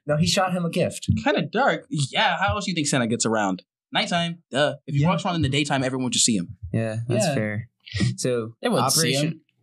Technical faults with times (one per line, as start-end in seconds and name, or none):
none